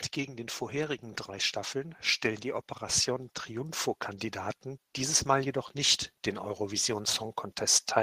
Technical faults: automatic gain rising

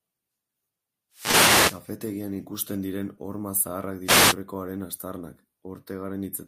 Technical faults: wireless microphone noise hit; short stall from a late packet

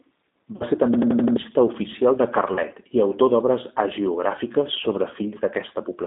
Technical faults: G.729 codec; VoIP packet loss concealed by the speech codec

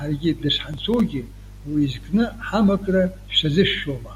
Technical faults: processor overload crackle

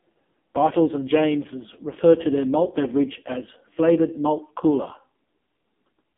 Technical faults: AMR narrowband mobile codec

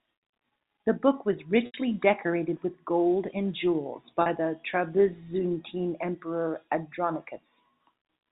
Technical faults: packet loss with pitch repetition

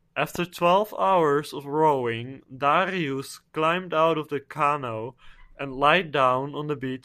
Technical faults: loud pop

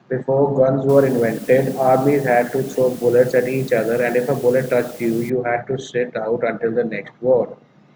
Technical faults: low bit depth with dither

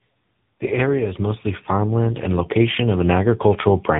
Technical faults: tandem speech coding

